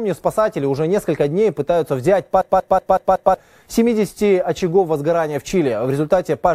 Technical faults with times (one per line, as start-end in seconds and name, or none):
2.41-3.34 system hang loop